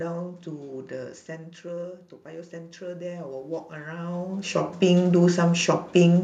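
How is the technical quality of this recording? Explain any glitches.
The recording has one glitch, automatic gain rising, from 1.26 to 5.10 s. After the talker moves back around 1 s, dropping the level about 13 dB, the gain control slowly adds about 13 dB, so voice and room noise swell together.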